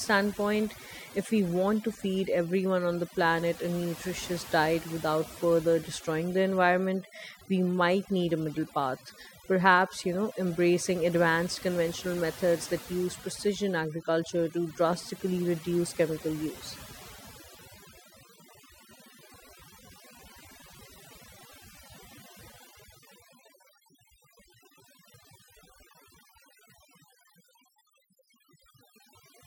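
Throughout the speech, overdone noise removal is audible. Strong reduction carves out quiet bands, leaving twinkling specks in near-silence.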